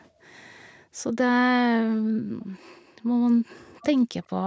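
Speech passed through call microphone processing, with nothing above 8 kHz, and one brief echo leak from 3.81 to 3.86 s. A faint, delayed copy of the speech surfaces for that short scrap, trailing the original by about 406 ms and sitting far below it, roughly 25 dB down. The likely cause is a far end playing the call on a loudspeaker, where the echo canceller failed to fully remove what its microphone picked up and sent that residue back.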